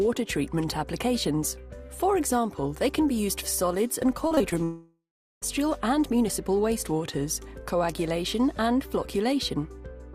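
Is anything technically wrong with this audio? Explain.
Yes. From 4.27 to 4.54 s, repeated packet loss (robotic sound) breaks up the audio. Five short gaps, the longest about 34 ms, are patched by extending prior sound, giving a choppy texture with pieces missing.

From 4.64 to 5.44 s, about 0.78 s of audio is missing. A fading buzz gives way to roughly 0.38 s of silence, likely a long network dropout.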